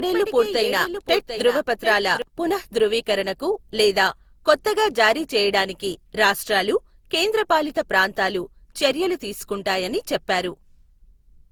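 Speech with two faults. Throughout, the sound is swirly, smeared and hollow beyond what a single encode would give, and consonant attacks blur. The likely cause is generation loss: repeated Opus decoding and re-encoding on shifting frame grids, with the character pointing to around seven passes at roughly 64 kbit/s, each adding fresh quantisation noise. From the start to 2.22 s, a doubled audio track is already running: a dry, full-band copy trails the original by about 0.7 s at about 10 dB lower, then stops abruptly, probably from a second, slower capture path.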